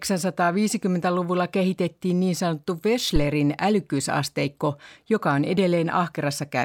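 It's a speech clip with a phantom power thump at 3.16 to 3.27 s, right after "kehitettiin niin sanottu" and before "älykkyysasteikko joka on". Phantom power switched on or off on a live input, the step punching through the coupling capacitors as a deep thump peaking around -10 dBFS, dying away within about 25 ms.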